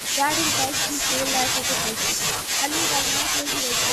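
Right from 0 to 0.15 s, and again from 1.62 to 2.7 s and 3.43 to 3.47 s, there's a faint copy of the speech trailing 280 ms behind, about 15 dB down. That's an echo leak, likely a loudspeaker echo the far end's canceller didn't fully remove. Between 2.59 and 2.63 s the speech briefly dips by around 10 dB, which sounds like speech suppressed in double talk, as the canceller ducked both sides at once.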